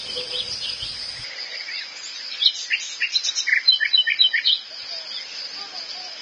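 These everyday sounds are hissy and grainy from start to finish, with roughened tones, smeared attacks and nothing above about 9.7 kHz. This is likely heavy Vorbis compression at a low bitrate, around 24 kbps. At that rate the encoder keeps only a smooth outline of the spectrum and quantises the treble residue so coarsely that fine detail turns into noise-like grain. It also pulls the cut-off down well below the top of the audible band.

At 1.24 s the sound abruptly turns duller and boxier, and it stays that way to the end. The top now stops at about 7.6 kHz, and a faint new background noise, roughly 40 dB below the signal, sits underneath. There is no gap at the change and no obvious jump in loudness. The cause is likely an input switched to a poorer device mid-recording: a narrower-band microphone or headset with its own tone and noise floor took over.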